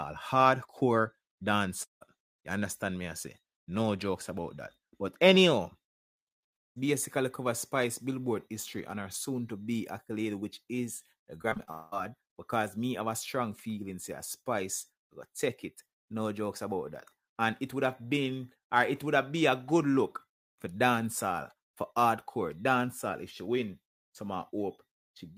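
At 1.83 to 2.03 s and 6.55 to 6.78 s the sound cuts out for about 0.18 s and 0.22 s. The first gap is a brief fading tail then silence, the second almost entirely silent. Each is likely a long network dropout, with the audio resuming minus the lost portion.

From 11.42 to 11.69 s, repeated packet loss gives a choppy texture. Five short holes, the longest 24 ms, are patched by extending the preceding sound, covering about 35% of the stretch. Straight after, from 11.71 to 11.94 s, another likely dropout removes about 0.2 s, fully bridged by a smeared continuation with no silence.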